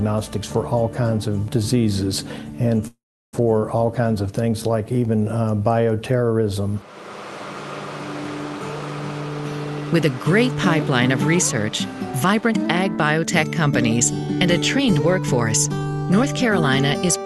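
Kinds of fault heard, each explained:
Call audio freeze: At 2.87 s the sound stops moving forward and the last moment is stretched into a fading buzz that sinks to silence for about 0.35 s. The audio resumes at 3.35 s exactly where it left off. Nothing is lost, but about 0.46 s of delay has been inserted. The likely cause is packets held up in transit, leaving the receiver's jitter buffer empty until they arrived.
Jitter buffer speed-up: From 9.93 s to 17.24 s the audio runs about 6% faster while the pitch stays unchanged. The receiver is trimming tiny slices, each one or a few pitch periods long, over and over. This drains the extra audio that built up in its buffer. Together the cuts remove roughly 0.4 s, so this stretch sounds slightly hurried. The Opus call coding underneath adds its usual coding noise and a soft top end near 12 kHz.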